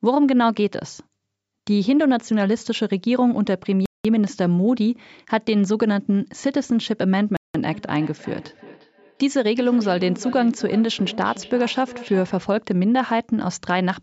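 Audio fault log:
3.86 s and 7.37 s, Bluetooth stall: playback drops to dead silence for 0.19 s and then 0.18 s before resuming, likely because radio interference delayed packets until the headphone buffer emptied. A waveform shows near-flat, near-silent gaps, and a spectrogram shows clean vertical blank strips.
7.73–12.52 s, feedback echo between two devices: each utterance returns roughly every 0.4 s, the loudest repeat about 16 dB below the direct speech, thinner and ringing. A second device's playback is re-captured by a microphone whose echo canceller cannot see it. A spectrogram shows fainter, evenly spaced copies trailing each phrase.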